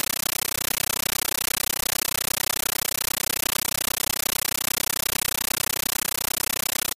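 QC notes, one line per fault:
Throughout: compressed stream played as audio. Undecoded AC-3 replaces the speech with loud chattering static: 13.3 ms noise blocks, 31.25 per second, separated by silent gaps.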